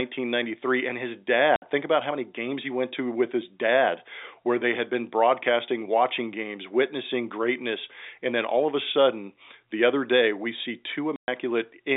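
At 1.56 s, after "and his", there's packet loss filled with silence: a 60 ms hole with hard edges, then again at 11.16 s after "other day we see", 120 ms, both fitting 30 ms packets over the narrow telephone band.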